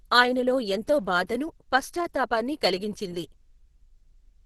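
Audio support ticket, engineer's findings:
Speech muffled and hoarse throughout, with grainy, rough texture on sustained sounds. Likely Opus compression at a low rate, around 12 kbps, in hybrid speech mode: heavy codec damage, bands filled coarsely rather than left empty, so less swirling than MP3.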